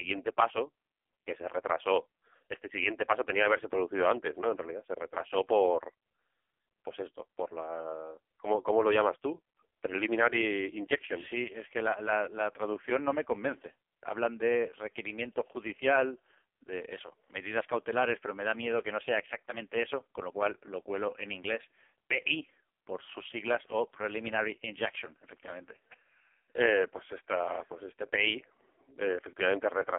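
Speech passed through an AMR narrowband mobile codec for the whole clip, with heavy damage. The voice sounds buzzy and synthetic, which fits AMR-NB's lowest 4.75 kbps mode. A spectrogram shows energy confined to roughly 300 Hz to 3.4 kHz, with nothing above.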